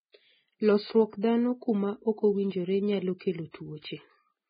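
The whole speech clip is band-limited, with nothing above about 4.9 kHz, and the treble left is grainy and hissy. That's likely heavy Vorbis compression at a very low bitrate, around 14 kbps. At 1.21 to 1.23 s there's pre-echo: a brief 21 ms smear of hiss right before an attack, where the codec's block noise leaks ahead of it.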